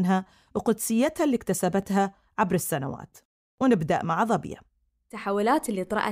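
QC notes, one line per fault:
0.29–4.89 s, clock drift buffer slips: about four regular clicks, one every 1.53 s, during speech. Likely two devices on mismatched clocks, off by several hundred parts per million, so the buffer periodically drops or repeats a few dozen samples, leaving a brief discontinuity.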